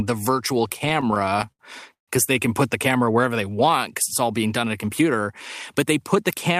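Speech, with two playback-timing faults. From 0.69 s to 2.09 s there are repeated stalls (stutter): the delivery halts in short hitches, about 19 of them, the longest 140 ms, and together they fill some 369 ms, roughly 27% of that stretch. Nothing is lost. The gaps are padded by extending the preceding sound, with the longer holds fading, because packets were arriving late or too slowly and the jitter buffer kept running dry. The result is dragging, stop-start speech rather than dropouts. From 3.21 s to 3.80 s there is a jitter buffer slow-down: the receiver stretched the audio by about 75 ms, playing it at 88% speed with the pitch unchanged. This comes from repeating individual pitch periods and slices of pause to rebuild a depleted or newly enlarged buffer reserve, so sounds in that span are drawn out.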